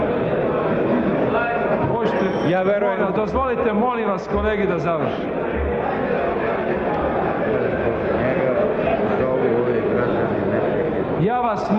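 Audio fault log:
No faults are audible; the signal stays continuous from beginning to end.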